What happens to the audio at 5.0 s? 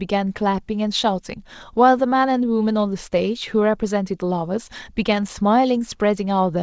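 At 5.0 s the speech carries on intact, with no dropout, glitch or distortion, only the 8 kHz band limit of the G.722 call path.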